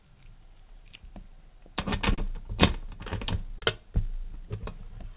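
A recording of everyday sounds, carried over a G.711 mu-law call path that leaves nothing above 4 kHz. Clock drift between sender and receiver, with the sender running about 2% slow, leaves the jitter buffer short of audio throughout, so the playback timing wavers unevenly. From 0.01 to 1.55 s, repeated timing corrections stretch the sound to 98% speed, adding roughly 40 ms and giving a slightly dragging, unsteady pace. A short stall from a late packet empties the buffer at 2.15 to 2.19 s and again at 3.59 to 3.63 s. Each time the last sound is held for about 30 ms before resuming, with nothing lost, producing a brief hiccup or dip.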